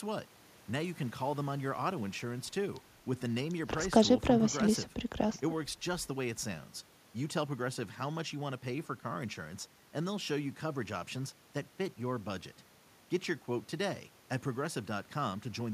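No technical faults can be heard anywhere in this speech recording, and the signal holds steady throughout with nothing that interrupts or degrades it.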